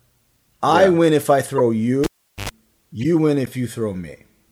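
At 1.57 to 1.60 s, just after "yeah win if I", a corrupt frame was decoded: flipped bits across a couple of compressed frames misplaced spectral energy, leaving a loud glitch.

From 2.04 to 2.49 s, a cable was pulled and plugged in: a pop, about 0.40 s of near silence, roughly 88 ms of 50 Hz mains buzz as the tip made contact, then a second pop.

At 3.01 to 3.05 s, another corrupt frame was decoded, again spanning a couple of frames, producing a fainter glitch of misplaced energy.

At 3.46 s, a block of digital silence about 10.7 ms long, 512 samples, cut the sound out and back, heard as an abrupt tick.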